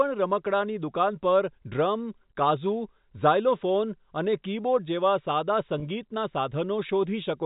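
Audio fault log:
5.80–5.82 s packet loss with pitch repetition: a 20 ms gap filled by repeating the last pitch period, giving a brief buzzy hold; the waveform shows repeated cycles fading in level.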